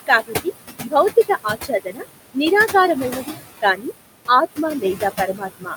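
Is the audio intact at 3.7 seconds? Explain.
No. From 3.61 to 3.92 s the noise suppressor cuts speech, mistaking it for noise. Across about a fifth of a second the sound drops by up to about 17 dB and sounds swallowed. Noise suppressor artifacts are also present here: background removed by about 19 dB from room noise that sits about 10 dB below the speech.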